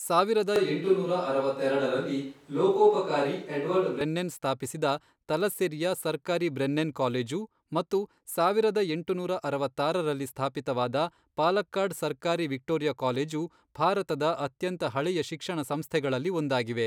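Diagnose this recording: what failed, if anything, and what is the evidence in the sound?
A switch to a distant microphone runs from 0.56 to 4.01 s, ending just before "ಸ್ಥಾಪಿಸಿದ ತಲಸ್ಸೆರಿಯ ಸರ್ಕಾರಿ ಬ್ರೆನ್ನೆನ್". The speech turns suddenly roomy and thinner, with little change in level and room noise around 35 dB below it. The likely cause is a close-mic failure at the analogue capture stage, leaving a farther pickup.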